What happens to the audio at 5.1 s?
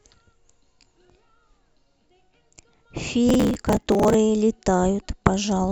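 At 5.1 s the speech carries on intact, with no dropout, click, distortion or other fault at that moment.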